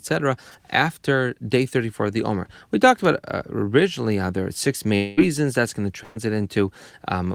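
At 4.95 s, just after "how there are six", the speech breaks into a held, fading buzz or hiss lasting about 0.22 s before resuming at 5.19 s with roughly 0.22 s of material skipped. This is likely a long network dropout, concealed throughout rather than falling silent.

At 6.03 s, after "going to", a burst of packet loss follows: about 120 ms of audio never arrives, and the receiver stretches the preceding sound into a decaying buzz or hiss until 6.17 s, when speech picks up further on with that stretch gone.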